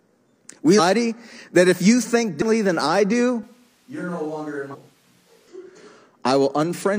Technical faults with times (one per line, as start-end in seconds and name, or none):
0.75-0.80 compressed frames skipped
2.37-2.43 compressed frames skipped
3.43-5.48 switch to a distant microphone
4.69-4.76 compressed frames skipped